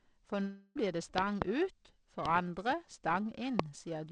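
Periodic clock jitter runs through the whole speech clip. The converter clock wobbles at around 1 kHz, adding sidebands that give a rough, metallic edge. From 0.42 to 0.77 s a long network dropout is audible, likely from lost packets. The missing stretch is filled with a fading buzz or hiss, then speech resumes further on. A loud pop arrives twice between 1.18 and 1.44 s, then once at 2.26 s and once at 3.59 s. Each sharp click sits roughly 25 dB above the speech, likely a voltage glitch, as the G.722 call audio continues underneath, with nothing above 8 kHz.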